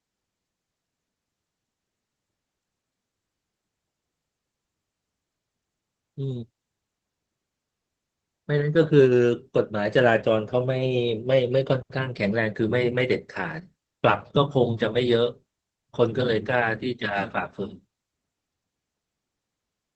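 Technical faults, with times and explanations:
Throughout, Opus voice compression. The speech is cut off above 8 kHz, so it sounds muffled. The linear-prediction coder spends few bits on the excitation, leaving it hoarse and slightly robotic. The plainly audible damage fits a low bitrate near 12 kbps.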